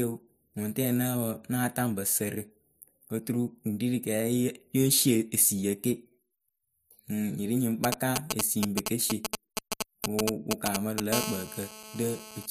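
From 7.84 to 11.00 s, just after "nyi ri nyi ŋ", GSM signalling bursts break in: a galloping dit-dit-dit of brief 217 Hz buzzes, roughly as loud as the speech. A nearby 2G phone is exchanging short groups of radio bursts with the network, and the audio circuit rectifies them. Unlike a continuous buzz, it arrives in clustered spurts.

From 11.13 to 12.46 s this becomes a GSM phone buzz: a hard, raspy 217 Hz tone with many harmonics, about 9 dB below the speech. The phone is now in a call and transmits steadily 217 times a second. The rate and the harshness set it apart from smooth mains hum.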